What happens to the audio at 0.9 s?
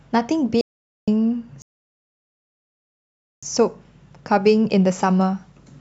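An audio dropout to silence runs from 0.61 to 1.08 s: the input was likely lost, so about 0.46 s of silence replaces the speech, with no room tone.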